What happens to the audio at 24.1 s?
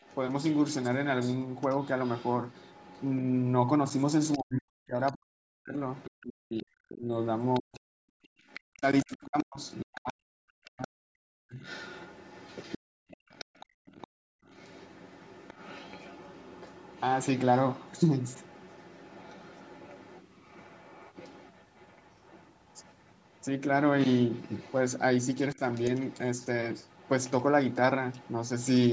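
At 24.1 s a second, fainter voice runs under the speech. It is the other side's voice leaking through, from 4.25 to 28.68 s. It sits about 20 dB below the talker. Likely the echo canceller left some loudspeaker playback in the microphone signal.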